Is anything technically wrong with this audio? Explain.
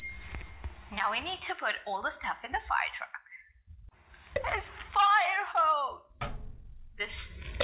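No, nothing here is technically wrong; the top end stops around 4 kHz, which fits an ordinary G.711 mu-law call line and is just how this kind of phone path sounds.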